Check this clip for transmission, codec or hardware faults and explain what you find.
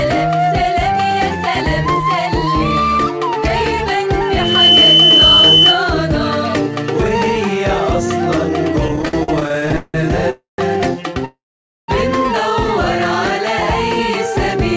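Three kinds of fault are audible: a feedback squeal, a run of stutters, and two call freezes. All of it arrives over a call path whose content stops at 8 kHz, which fits G.722 at 64 kbps.

From 4.25 to 5.84 s there is a loudspeaker feedback squeal. A microphone is hearing its own loudspeaker, and at 3 kHz the loop gain tops unity, so that tone feeds on itself. It swells in under half a second to roughly 10 dB above the rest of the sound. On a spectrogram it shows as a single bright horizontal line at 3 kHz. In the waveform the envelope visibly fattens across that span.

Between 8.88 and 9.96 s the audio stutters repeatedly. Packets kept reaching the receiver late, so the jitter buffer emptied again and again. Each time, the last sound was stretched to fill in, with 19 separate fills totalling about 0.44 s, the longest 170 ms. Nothing is lost, but the passage drags and judders. A spectrogram shows smeared, repeated slices and brief fades. 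The waveform shows short held or tapering stretches between normal ones.

Call audio freezes occur at 10.30 to 10.60 s and 11.25 to 11.90 s. The audio halts, the last sound trails off into near silence, and then playback resumes where it stopped, so a gap of about 0.28 s and then 0.63 s is inserted with nothing missing. The likely cause is packets held up in transit draining the jitter buffer. In both views these appear as a fading smear followed by a flat, empty stretch, about 150 ms in the first and 510 ms in the second.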